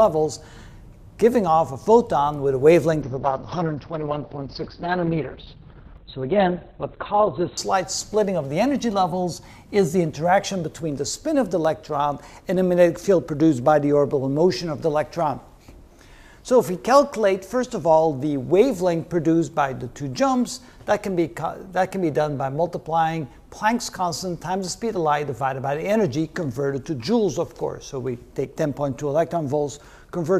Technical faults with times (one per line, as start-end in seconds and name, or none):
3.03-7.63 call bitrate drop